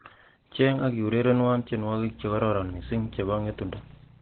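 Throughout, the speech sounds muffled and hoarse, with nothing above 4.4 kHz and heavy codec damage. That points to Opus compression, likely in its narrowband SILK speech mode at a very low rate, one that fits about 12 kbps, trimming bandwidth and detail.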